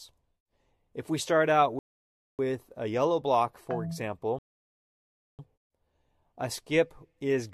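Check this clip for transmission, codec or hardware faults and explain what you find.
Two rebuffering stalls interrupt the clip. From 1.79 to 2.39 s, and again from 4.39 to 5.39 s, the sound drops to silence for about 0.6 s and then 1.0 s, then picks up exactly where it stopped. The player exhausted its downloaded audio and waited for more, adding time without losing any material.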